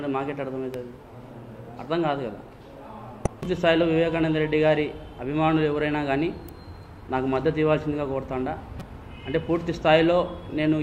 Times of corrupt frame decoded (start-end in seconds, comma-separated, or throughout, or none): 3.25-3.28, 8.79-8.82